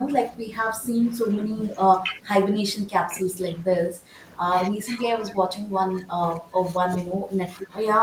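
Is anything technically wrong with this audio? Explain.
Yes. The speech keeps dipping in level in four stretches: 0 to 0.5 s, 0.81 to 3.3 s, 3.62 to 4.18 s, and 4.71 s to the end. It drops around 10 dB, nearer 15 dB in the last stretch. That's likely speech suppressed in double talk. With both ends talking at once, the echo canceller couldn't separate this talker from its loudspeaker echo and turned both down.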